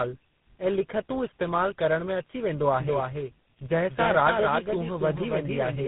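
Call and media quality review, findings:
Tandem speech coding, throughout: speech rough, muffled, warbly, nothing above 3.8 kHz. Three lossy codecs in sequence, GSM full rate, G.726 at 24 kbit/s, GSM full rate, bridged via G.711 mu-law. Each re-encodes prior codec's artefacts, compounding distortion.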